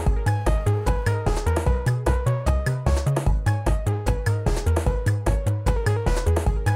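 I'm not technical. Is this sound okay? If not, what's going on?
No. From 0.34 to 1.15 s there is GSM phone buzz: a raspy buzz unrelated to the sound itself. A nearby mobile phone on a call sends radio bursts about 217 times a second, and the recording equipment picked those pulses up as audio.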